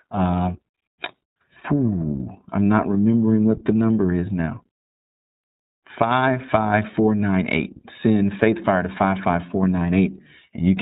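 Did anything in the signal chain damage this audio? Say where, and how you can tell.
Yes, the codec stage did it, and it's there for the whole clip. The speech is walled off at 4 kHz with nothing above it, and it has that slightly rough, synthetic edge, plainly audible throughout. That's iLBC. It codes the excitation of each frame on its own without drawing on the previous one, so the texture never quite smooths out. The sound fits iLBC's 30 ms frame mode at around 13.3 kbps.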